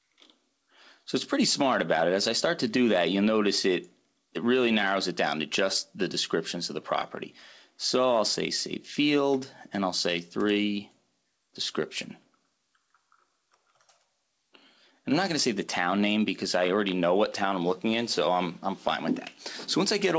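Nothing stood out on listening; the sound comes through the call path with its expected band limit, nothing audible above 8 kHz, and no disturbance anywhere in the clip.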